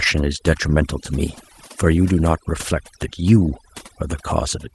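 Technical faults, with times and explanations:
Throughout: overdone noise removal. The noise reduction was set far too aggressively for the level of background noise, so individual frequency bands near its noise estimate are pushed down hard or switched off entirely. The background drops and breaks up into twinkling specks, and the quieter parts of the speech are caught by the same gating. Beneath this, the light coding from the 24 kbps Opus stream adds little.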